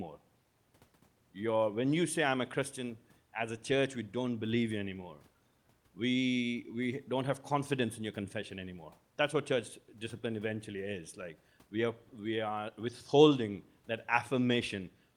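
No technical faults are audible.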